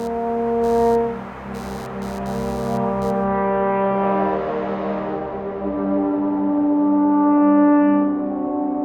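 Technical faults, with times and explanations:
0.00–3.24 s, computer activity noise: a buzzy, chirping layer sits under the music, pulsing at around a hundred times a second and roughly 25 dB below it. Its rhythm follows the host computer's workload rather than anything in the music. Shifts in processor or graphics load pull on the ground the audio circuit shares with them, and the resulting ground current leaks in as this scratchy buzz, which stops after the first three seconds.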